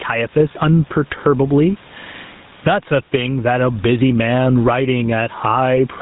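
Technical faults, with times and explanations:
Throughout, gain pumping: the background sits about 37 dB below the speech, and the level swings by around 15 dB, leaving loud and soft parts squashed closer together. The likely cause is input gain set far too high, with a fast limiter clamping it back down.
Throughout, GSM full-rate codec: the speech has a buzzy, gravelly roughness and nothing above 3.8 kHz, which fits the 13 kbps full-rate codec rebuilding the voice from a vocal-tract model driven by sparse, regularly spaced pulses, leaving plainly audible coding damage.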